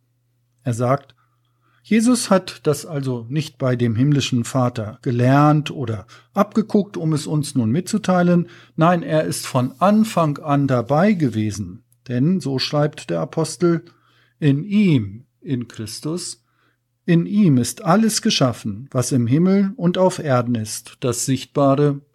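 No technical faults can be heard in this speech recording. There is nothing at any point that calls for a time mark or a measured value.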